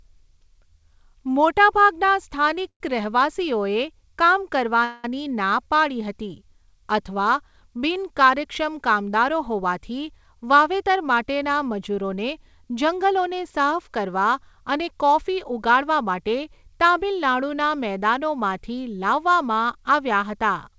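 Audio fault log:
2.06–2.08 s, short stall from a late packet: a packet missed its slot, so the receiver stretched the last sound about 16 ms, giving a brief held buzz without lost speech.
2.68–2.81 s and 4.84–5.05 s, call audio freeze: the sound hangs as a fading buzz, reaching 80 ms of silence in the first, likely from packets held up in transit emptying the jitter buffer.
10.19–13.22 s and 14.81–16.14 s, jitter buffer speed-up: speech runs about 6% then 5% faster at unchanged pitch, as repeated pitch-period cuts trim roughly 0.2 s and under 0.1 s of backlog.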